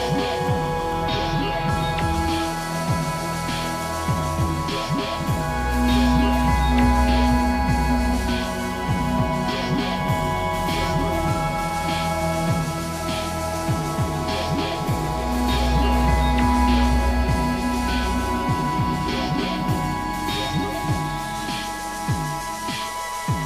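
No technical faults can be heard anywhere in the recording. Nothing in it breaks, drops out or changes character from one moment to the next.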